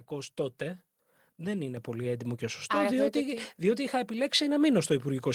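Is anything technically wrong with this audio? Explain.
Yes. At 1.77 s the speech and the background behind it suddenly get louder together, by about 5 dB, and stay at that higher level. This is a microphone volume stepped up fault. The call software judged the microphone input too quiet and raised the device's input gain in a single jump rather than gradually. Because the gain sits ahead of everything captured, voice and room noise rise by the same amount at the same instant.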